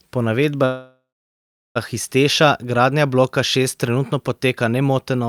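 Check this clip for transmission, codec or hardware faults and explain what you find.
A call audio freeze breaks the speech from 0.65 to 1.77 s. The last sound smears into a fading buzz, then about 0.7 s of silence, and the speech picks up exactly where it stopped, likely because delayed packets drained the jitter buffer. Unlike a dropout, nothing is lost; about 1.1 s is inserted.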